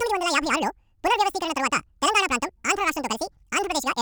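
From the first moment to the end, the speech plays at twice its proper speed and a full octave (12 semitones) too high, the classic sound of audio read two samples at a time. The playback side appears to treat each pair of samples as a single frame, as if it expected two channels or samples twice as wide, so everything rushes by.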